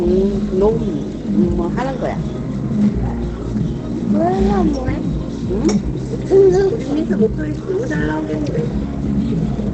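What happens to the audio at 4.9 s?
At 4.9 s the sound is muffled and hoarse, and this runs through the whole clip rather than starting there. Nothing sounds above about 8.7 kHz, so a spectrogram shows a flat ceiling with empty space above it. The likely cause is Opus compression in its speech-oriented SILK mode at wideband, consistent with a low rate near 16 kbps, where the encoder models the signal coarsely instead of preserving full detail.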